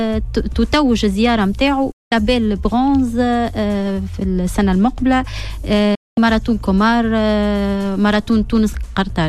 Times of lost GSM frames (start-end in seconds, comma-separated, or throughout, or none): none